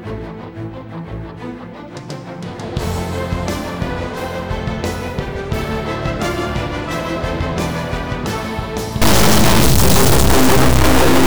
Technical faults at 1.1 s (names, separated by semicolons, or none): none